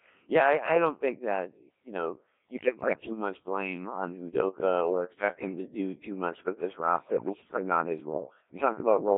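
Throughout, the speech is synthetic and buzzy, confined to roughly 250 Hz to 3.5 kHz: the Codec 2 vocoder, rebuilding the voice from pitch, voicing, energy and envelope rather than the waveform. The heavy robotic tone fits its 1.3 kbit/s mode, unlike ordinary codec smearing. From 2.57 to 3.11 s, between "that you know you" and "much blame on", bit errors on digital voice radio throw pitch, level and tone into warbling gibberish. A milder burst follows from 6.97 to 7.56 s, after "too much with this" and before "not his". The rest of the sound is not silenced or repeated as in packet loss; instead the errors corrupt the vocoder's frame values, so it warbles.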